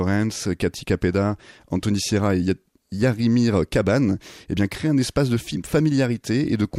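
DAB burbling hits this speech clip at 4.71 s, between "eh bien" and "un espace de", and again from 6.43 to 6.48 s. Weak reception lets a small fraction of a percent of bit errors slip past error correction, corrupting MP2 samples and scale factors so single sub-bands get short noise blips or jump in level.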